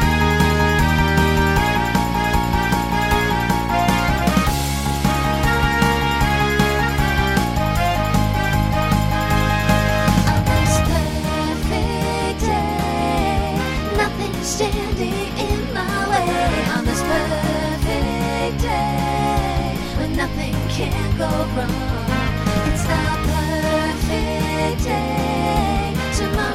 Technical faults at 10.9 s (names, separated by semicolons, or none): none